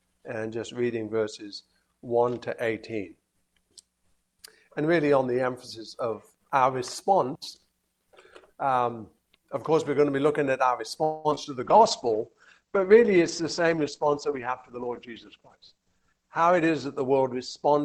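At 11.03 s the sound stalls for about 212 ms, continuing as a fading buzz rather than dropping out. This is a call audio freeze, likely from held-up packets draining the jitter buffer. Nothing is lost: playback resumes where it stopped, which distinguishes it from packet loss.

Right after, two short concealed packet losses land at 11.31–11.33 s and 11.35–11.39 s. Each is a 20 ms hole patched by extrapolation, heard as a quick smear or wobble. Unlike the freeze, real audio is missing here, not delayed.

From 11.59 s to the end, a call bitrate drop takes Opus from 48 to 10 kbps, holding the lowest rate for about 4.5 s. The top end is cut to 8 kHz, so the sound turns muffled and watery. Unlike the brief glitches, it is sustained coarseness.

Between 14.40 and 16.15 s, a jitter buffer speed-up plays the sound at 111% speed while pitch stays unchanged, trimming about a fifth of a second of backlog. 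It sounds hurried rather than higher, which separates it from a simple resampling error.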